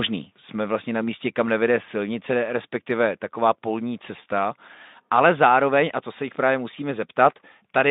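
Nothing stood out as a fault on listening to this speech clip, which comes through a Speex connection limited to the narrow telephone band.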